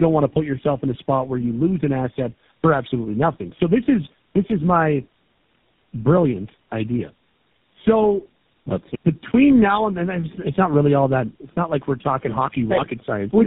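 A speech clip with tandem speech coding throughout. The sound is rough, muffled and warbly from start to end. Nothing is heard above about 3.7 kHz, which points to a narrowband telephone path. The damage sounds like several speech codecs in a row, perhaps four, with a GSM full-rate coder last. At each link border the speech was decoded and coded again. Every coder had to model the previous one's errors. So the artefacts piled up.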